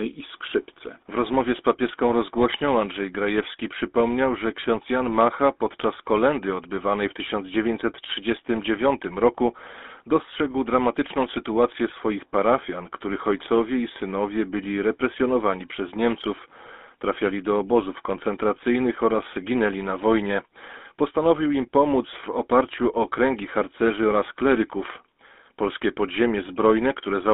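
Speech heard throughout through a GSM full-rate codec: band-limited to about 250 Hz to 3.6 kHz, with a buzzy, gravelly roughness from the regular-pulse excitation that plain telephone filtering wouldn't add.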